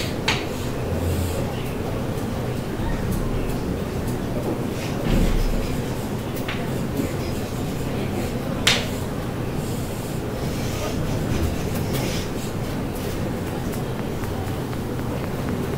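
At 13.48 s a train of clicks begins and runs to 15.75 s, near the end of the clip. About ten sharp ticks arrive at a steady pace of close to four per second. Each one has much the same shape. They stand out clearly, peaking around 10 dB above the surrounding sound. The pulses ride on top of the audio and continue through any gaps. The likely cause is an outside source injecting a repeating pulse, such as interference from nearby equipment or a faulty connection or power supply.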